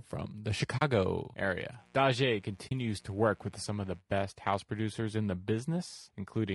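Throughout the clip the speech sounds rough and grainy, with a hiss sitting between the harmonics of the voice and a thin, somewhat artificial top band. That texture is most likely the work of low-delay AAC compression, the AAC-ELD kind used for video calls. Its short frames separate pitch harmonics poorly, so at this rate, which fits something near 32 kbps, the coder cannot spend enough bits to keep the voice smooth, and the damage is plainly audible.

From 0.77 to 0.82 s the sound drops into a brief, soft-edged silence, roughly 40 ms long, that fades out and back in. This is AAC frame loss with muting. The gap points to two lost frames whose spectrum the decoder set to zero, and the overlapping windows on either side smear the edges so the hole opens and closes gently rather than abruptly.

From 1.76 to 4.03 s a steady, raspy buzz runs underneath the speech, well below its level. This is mains buzz at 60 Hz. 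Something like a dimmer, a rectifier or an unshielded connection lets sharp switching spikes into the signal twice per mains cycle, and their harmonics climb into the kilohertz range, which gives the hum its gritty edge.

Inside that buzzy stretch, from 2.67 to 2.72 s, a second muted gap of about 40 ms appears. It is another instance of AAC frame loss with muting, again fitting two lost frames. It shows the same gentle fade out and back in.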